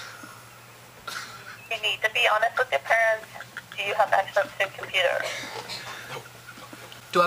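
From start to end the audio carries a crude rate conversion. The pattern of the error points to a change from 44.1 kHz to 48 kHz done by nearest-sample picking, so samples were simply repeated at regular intervals rather than filtered and interpolated. That uneven stepping folds shifted, inharmonic copies of the content back into the band, at about 25 dB below the signal, heard as a gritty buzz or fizz that tracks the louder and brighter passages.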